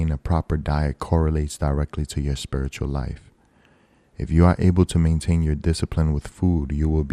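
A speech recording that sounds dull and granular from start to finish, with a gurgling distortion and upper frequencies that flicker in and out, most likely from MP2 compression at a low rate, consistent with roughly 80 kbps. Unlike a steady low-pass filter, the missing top end keeps switching on and off.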